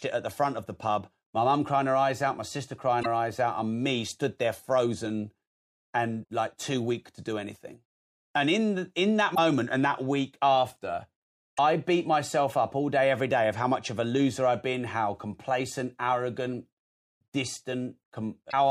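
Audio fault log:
2.99–3.06 s, 6.21–6.25 s, 9.31–9.38 s, 11.53–11.59 s and 18.48–18.54 s: damaged data in a compressed stream. Each is a 40 to 70 ms chirp, squawk, click or short hole in the speech, the first just after "eyes out my sister" and the third just after "in in that". Corrupted bytes make the decoder misread frames, lose sync and hunt for the next header.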